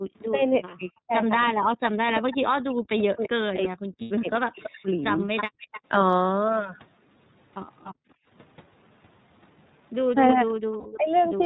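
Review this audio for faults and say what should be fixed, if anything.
The whole clip runs through the iLBC codec at 13.33 kbps with 30 ms frames. Nothing above 4 kHz survives, so the speech sounds plainly rough and synthetic. A wideband codec would fix that.

There's speech suppressed in double talk from 0.28 to 5.51 s, about three seconds in all, dipping as much as about 40 dB, and again from 10.34 to 11.16 s, about 15 dB down. The likely cause is the echo canceller ducking the talker while both sides speak. A better double-talk detector would help.

Echo leak shows up at 1.46–3.28 s and 4.35–5.81 s, a copy 325 ms late at about 10 dB down. It comes back at 7.84–7.94 s and 10.49–11.22 s, 292 ms late at about 20 dB down. That's likely a loudspeaker-side canceller letting some residue through. A headset or better far-end cancellation would stop it.

There are lost iLBC frames at 4.01–4.11 s (90 ms, which fits three frames) and 10.80–10.87 s (60 ms, which fits two). 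Each gap is bridged with a brief buzzy held sound. A steadier network or some redundancy would cover these.

The background gets gated by the echo canceller from 7.94 to 8.27 s. The room sound drops about 40 dB for roughly 0.3 s, then returns. Gentler suppression with comfort noise would smooth that out.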